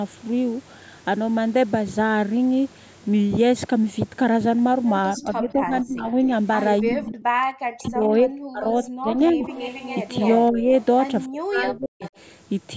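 From 5.17 to 6.14 s and again from 6.82 to 9.45 s the talker sinks, up to roughly 40 dB down in the second stretch, and breaks into pieces. That's speech suppressed in double talk, likely because the echo canceller couldn't tell the near voice from the far-end echo during overlap and ducked both. A faint echo leak blips at 7.84 s, a copy arriving about 0.28 s late, likely from a speakerphone whose canceller didn't catch everything. From 8.84 to 10.85 s that delayed copy sits louder, only about 15 dB under the main voice. Brief further dips come at 10.51 to 10.71 s and, deeper, 11.26 to 12.04 s, with another quiet echo scrap from 11.77 to 12.10 s.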